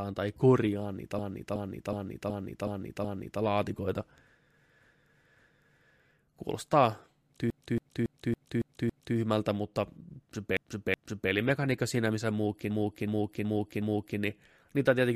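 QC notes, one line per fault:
1.19–3.42 s, repeated frames: after "tai korjaan niitä", a 371.5 ms block of compressed frames was delivered six extra times, so that fragment loops as a stutter adding 2.23 s.
4.81–5.92 s, repeated frames: a longer 557.3 ms block was resent twice more, so the decoder replays the same stretch back to back, lengthening the audio by 1.11 s.
7.50–9.17 s, repeated frames: a short 278.6 ms block was written six extra times, giving a rapid stutter that repeats the same fraction of a second and adds 1.67 s.
10.57–11.31 s, repeated frames: between "mutta se" and "siinä missä", a 371.5 ms block was played twice more, so the decoder repeats it, inserting 0.74 s.
12.70–14.19 s, repeated frames: just after "siinä missä", a 371.5 ms block was resent four extra times, producing a looping stutter that stretches the clip by 1.49 s.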